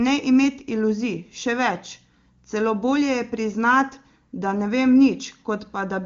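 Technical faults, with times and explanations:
The speech comes through the AMR wideband (HD Voice) codec with little or no audible coding damage, its clarity fitting the codec's highest rate, and the band stops at about 7.3 kHz, as that wideband path would make it.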